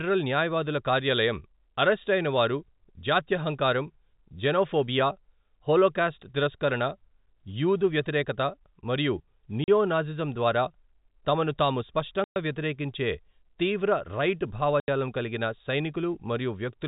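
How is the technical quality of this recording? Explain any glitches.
The speech has a telephone-band sound from G.711 coding, with nothing above 4 kHz, and it is broken by three silent gaps. Packet loss filled with silence cuts out 40 ms at 9.64 s, 120 ms at 12.24 s and 80 ms at 14.8 s. Every gap is a multiple of 20 ms, which fits lost 20 ms packets replaced by digital silence. Each hole has abrupt, hard edges. Concealment would smear or repeat the sound, and a noise gate would fade it out.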